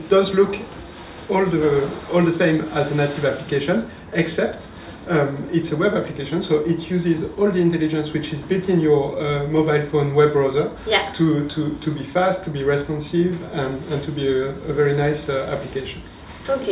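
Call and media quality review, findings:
No faults found on this capture. Nothing in the audio calls for a ticket entry.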